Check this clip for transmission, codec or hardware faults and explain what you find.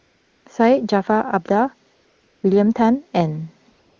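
One fault recurs here: AMR comfort noise, during the pauses from 0.00 to 0.45 s, 1.95 to 2.43 s and 3.71 s to the end. The phone judged the talker silent and stopped sending speech frames, so the receiver generated a smooth, steady synthetic hiss from a rough level-and-spectrum sketch. Unlike a gate or dropout, these gaps aren't silent. The real background is swapped for uniform noise that switches in and out at each pause, heard against clear HD Voice speech.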